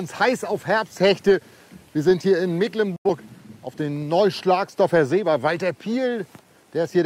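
At 2.96 s a digital broadcast dropout mutes the sound with a fast fade of about 8 ms, leaving roughly 85 ms of silence, which fits two lost frames, before audio resumes at 3.09 s. The waveform shows a flat gap; the spectrogram, a blank vertical band.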